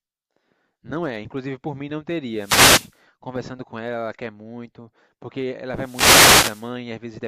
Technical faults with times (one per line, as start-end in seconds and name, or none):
2.33-2.98 wireless microphone noise hit
5.75-6.74 wireless microphone noise hit